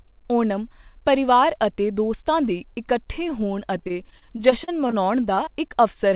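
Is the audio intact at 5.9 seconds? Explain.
No. From 5.35 to 6.06 s, repeated packet loss (robotic sound) hits the call stream: several packets go missing, none for longer than 20 ms, and each gap is covered by stretching the preceding sound. At 5.9 seconds the speech turns choppy, with small pieces dropped.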